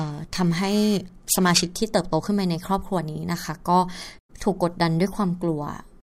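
From 0.0 to 1.75 s the speech carries periodic clock jitter: interference wobbles the converter clock at around 2 kHz, adding paired sidebands beside each component, strongest on high frequencies. Unlike random jitter's diffuse hiss, it gives a tonal, metallic roughness that disappears in pauses.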